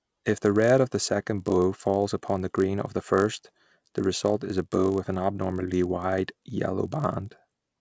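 From start to finish, the speech carries a 50 Hz buzz that is present only while sound is present. This is a resampler restarted on every block: each 20 ms block was converted separately from 44.1 kHz to 16 kHz, leaving a small error at every block edge.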